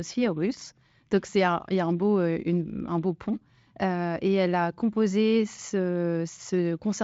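No technical faults are audible.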